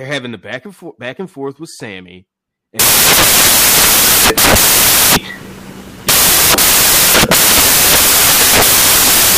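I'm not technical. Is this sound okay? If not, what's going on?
No. The speech is clean until about 2.79 s. Then it turns into loud hiss, like white noise, and stays that way to the very end. This fault is called samples built from the wrong bytes. Each sound value is stored as a few small pieces. Here the player joins those pieces up in the wrong order or slightly out of step. The tiny, jittery details end up as the main part of the sound.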